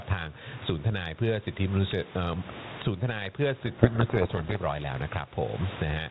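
Right from the start there's gain pumping: the gain ducks by around 20 dB under each loud syllable, likely from gain set too high feeding a fast limiter. Then from 3.66 to 4.57 s we get a codec payload misread. The G.726 code words arrive with their bit order flipped, so the decoder buries the speech in harsh, rasping distortion until both ends agree on the bit format again. Outside that stretch the light ADPCM grit fits a 32 kbit/s link.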